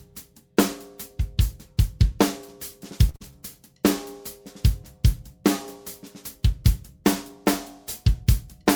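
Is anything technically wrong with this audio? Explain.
Yes, there are two linked network faults just after the three-second mark.

From 3.09 to 3.16 s there is a short stall from a late packet. The receiver's jitter buffer ran dry, so it held the last sound for about 45 ms until the packet turned up, then carried on from the same point. Nothing is lost, but the delay grows by 45 ms, and that sound lingers with a faint buzz. On a spectrogram this shows as a flat, smeared stripe where the harmonics stop evolving. The waveform shows a repetitive, slightly dipped stretch.

Immediately after, from 3.16 to 3.33 s, comes a short concealed packet loss. About 60 ms of audio never arrived in time. The decoder covered roughly 45 ms of that gap by extending the preceding sound and then crossfaded back, trimming the built-up delay by around 15 ms. It is heard as a brief smear or wobble. A spectrogram shows a blurred patch. 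The waveform shows an envelope that doesn't match its surroundings.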